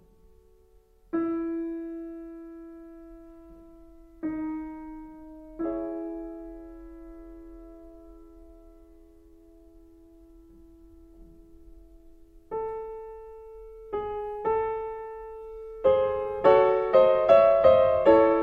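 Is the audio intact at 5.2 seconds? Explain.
Yes, the audio is intact at 5.2 seconds, with no fault to be heard at that moment.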